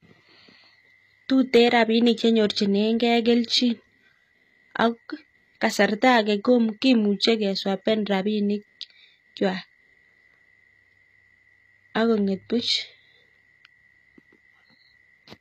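Speech runs through its whole length with plainly audible damage that is likely HE-AAC compression. The treble stays bright but sounds synthetic. S sounds come out gritty and lispy because the upper band is copied up from lower frequencies rather than coded, so its harmonics don't line up with those below. Unlike an ordinary low-bitrate codec, which dulls the top, this keeps energy up to 14.9 kHz, which fits a bitrate around 24 kbps.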